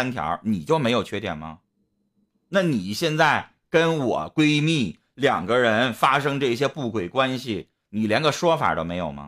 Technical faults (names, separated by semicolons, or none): none